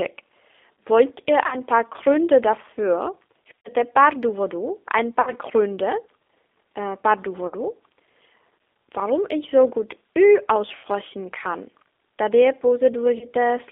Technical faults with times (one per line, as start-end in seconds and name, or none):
0.00-13.72 G.729 codec
1.46-1.58 VoIP packet loss concealed by the speech codec
3.59-3.70 VoIP packet loss concealed by the speech codec
5.21-5.33 VoIP packet loss concealed by the speech codec
7.47-7.56 VoIP packet loss concealed by the speech codec
10.75-10.85 VoIP packet loss concealed by the speech codec
13.18-13.27 VoIP packet loss concealed by the speech codec